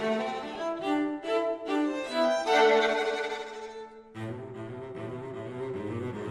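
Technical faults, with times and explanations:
Throughout: MP2 compression. The music sounds dull and gurgly, with a grainy edge as the upper sub-bands drop in and out and the rest get quantised coarsely. It's plainly audible, and it's most likely a low-rate MP2 encode, around 80 kbps.
0.55 s: DAB burbling. There's a brief burst of burbling here, short blips of noise in single sub-bands. That's what you get when a small share of bit errors slips past error correction and corrupts a few MP2 frames' audio data.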